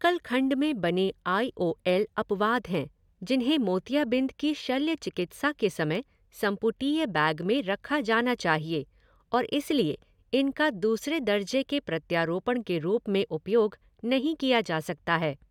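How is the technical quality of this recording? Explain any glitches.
No technical faults are audible.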